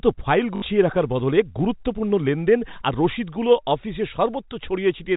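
From 0.56 to 0.62 s, packet loss with last packet repeated: about 60 ms of the stream went missing, which fits three lost 20 ms packets, and the receiver filled the gap by replaying the last packet it had received until fresh audio arrived just before "রাখার বদলে গুরুত্বপূর্ণ লেনদেন". The repeated 20 ms block gives a brief robotic stutter buzzing near 50 Hz, heard through the band-limited G.711 telephone path.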